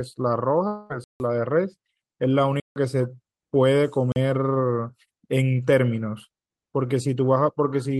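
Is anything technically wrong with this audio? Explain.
Yes, the speech has two kinds of fault.

A long network dropout runs from about 0.67 to 0.92 s. Audio likely stopped arriving, and the receiver filled roughly 220 ms by extending the last sound as a fading buzz. That stretch of speech is lost, and the voice resumes further on.

Blocks of digital silence occur at 1.04 to 1.20 s, 2.60 to 2.76 s and 4.12 to 4.16 s, lasting 160, 160 and 40 ms. Samples were replaced by zeros, so the speech cuts hard to nothing and back, leaving a short hole.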